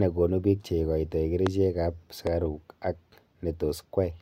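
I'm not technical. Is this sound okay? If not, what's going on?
No, two loud pops interrupt the speech, at 1.47 to 1.49 s and 2.27 to 2.29 s, the first one noticeably stronger. A brief electrical jolt, likely from a plug, switch or static, got added to the signal, making a sharp thump while the speech carries on underneath.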